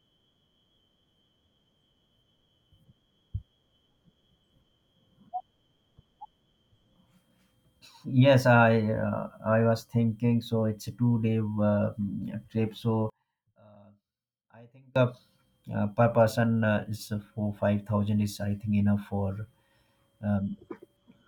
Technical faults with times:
13.10-14.96 one channel inverted

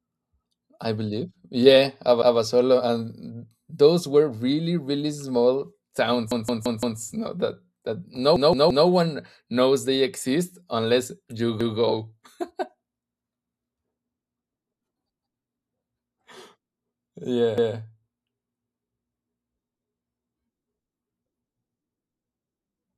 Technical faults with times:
6.31-7.00 repeated buffer
8.36-8.87 repeated buffer
11.61-11.78 repeated buffer
17.58-17.75 repeated buffer

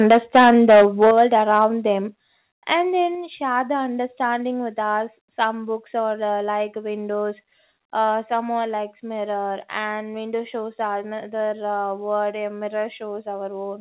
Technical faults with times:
0.10-1.65 microphone overload
0.11 microphone volume stepped down
1.11 microphone volume stepped down
2.13 microphone volume stepped down
3.15 microphone volume stepped down
8.25 microphone volume stepped down

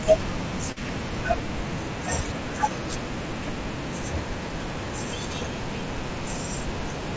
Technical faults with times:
0.72-0.78 short concealed packet loss

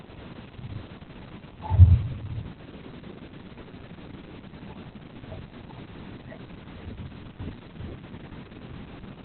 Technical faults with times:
0.00-9.25 Opus voice compression

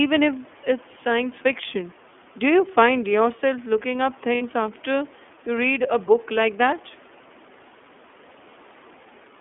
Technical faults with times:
0.00-9.40 iLBC codec
4.35-4.42 lost iLBC frames

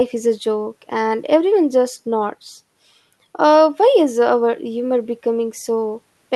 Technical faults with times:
none

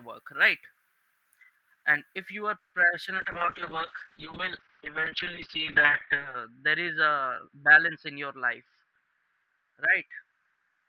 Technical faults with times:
0.00-2.17 pre-emphasis left on
2.58-2.72 call audio freeze
3.18-10.88 call bitrate drop
8.36-10.18 jitter buffer speed-up

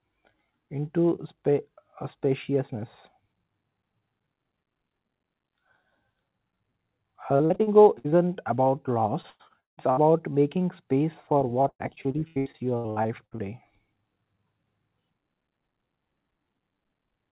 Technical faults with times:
7.36-8.14 repeated packet loss (robotic sound)
9.22-10.04 repeated packet loss (robotic sound)
11.62-13.40 repeated packet loss (robotic sound)

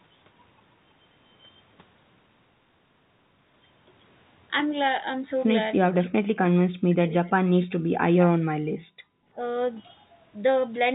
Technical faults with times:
5.79-8.59 speech suppressed in double talk
8.87-9.07 background gated by the echo canceller
9.35-9.39 speech suppressed in double talk

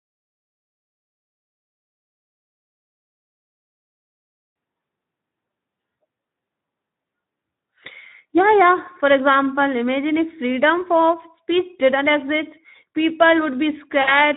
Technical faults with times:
0.00-14.36 Speex codec
14.01-14.13 VoIP packet loss concealed by the speech codec

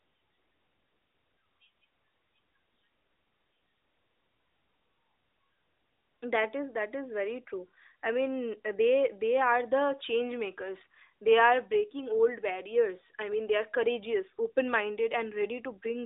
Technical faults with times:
none

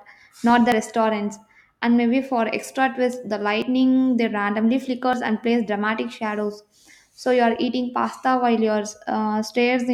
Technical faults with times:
0.72 dropped buffer (overrun)
3.62 dropped buffer (overrun)
5.13 dropped buffer (overrun)

